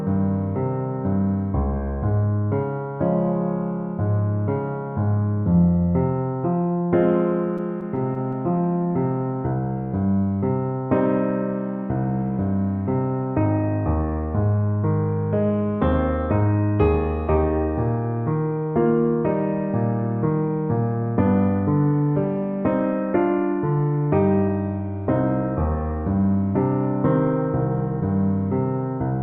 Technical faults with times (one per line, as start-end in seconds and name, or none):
7.57-8.35 scattered short gaps